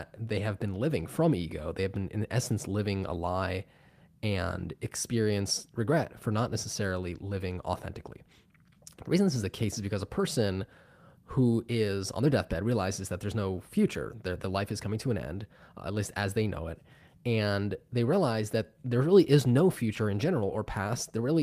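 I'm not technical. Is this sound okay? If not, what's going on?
Yes, this one sounds fine, with nothing here that needs fixing.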